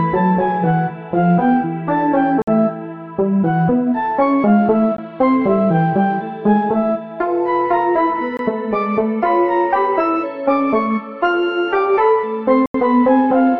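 At 2.42–2.48 s, 4.97 s, 8.37–8.39 s and 12.66–12.74 s the sound drops into blocks of digital silence lasting 55, 17, 21 and 85 ms, likely because the output buffer wasn't filled in time. The 21 and 85 ms gaps fit 1024- and 4096-sample buffers. The longest gaps read as holes.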